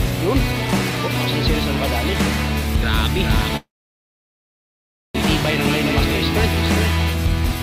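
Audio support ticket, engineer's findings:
Call audio freeze 3.57–5.16 s: buzz fading to silence, then audio resumes where it stopped, nothing lost. Likely jitter-buffer underrun from delayed packets; adds 1.58 s lag.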